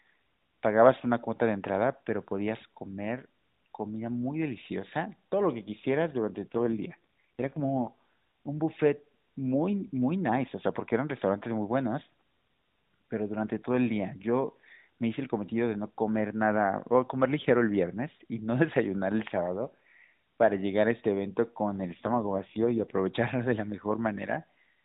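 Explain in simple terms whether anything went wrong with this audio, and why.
Twice the speech briefly turns rougher and more synthetic, from about 6.4 to 7.9 s and again from 21.9 to 23.0 s. This is an AMR rate drop. The mobile network told the phone's speech codec to squeeze the voice into far fewer bits, most likely because the radio link weakened, so the voice model has less detail to work with. The sound never cuts out and stays just as muffled as the narrowband phone call around it.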